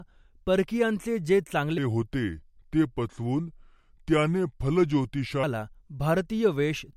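At 1.78 s, right after "परकियांचे जे", the speech drops into a section at the wrong speed. It runs until 5.43 s. The playback rate falls to 0.801 times normal. Speed and pitch sink together, by about four semitones. The voice turns deep, heavy and drawn out. Each syllable stretches. The likely cause is the section being played against the wrong clock. At 5.43 s the normal rate returns abruptly.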